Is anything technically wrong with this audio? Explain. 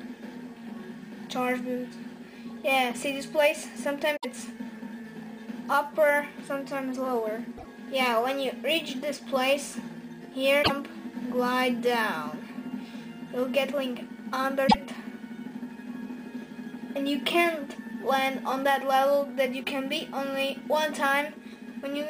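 Yes. The audio has damaged data in a compressed stream at 4.14, 7.54, 10.59 and 14.64 s. At each point, corrupted bytes make the decoder misread frames and lose sync until it finds the next frame header. The result is a brief chirp or squawk of about 0.11 s.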